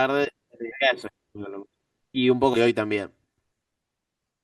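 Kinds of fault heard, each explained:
Compressed frames skipped: whole frames of the speech never get decoded, so the audio jumps forward, by about two frames near 0.71 to 0.74 s and about four near 2.53 to 2.57 s, which fits 20 ms frames. Unlike a dropout, no silence is inserted.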